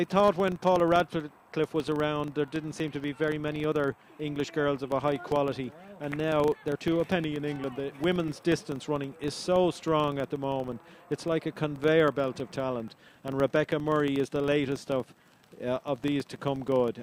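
Throughout, a filter restarted on every block leaves a 25 Hz buzz of ticks that rises and falls with the sound's level, unlike steady mains hum.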